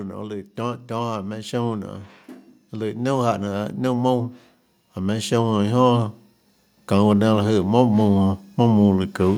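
The automatic gain control judged the input too quiet and raised its gain gradually. That happens twice: by about 7 dB from 2.73 to 6.07 s, then by about 6 dB from 6.73 to 9.33 s. Each time, the voice and background swell up together.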